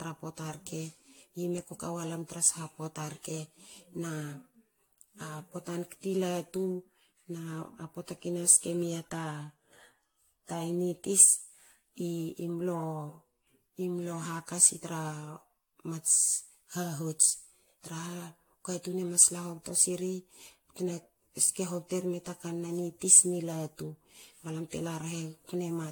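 From start to finish the speech has that swirly, hollow, smeared quality of generation loss, with consonant attacks blurred and nothing above about 18.6 kHz. It sounds worse than a single pass at the bitrate would suggest. The likely cause is repeated lossy encoding, something like AAC-LC around 96 kbit/s applied maybe seven times over, each round re-quantising on a shifted frame grid so the noise and spectral holes keep stacking up.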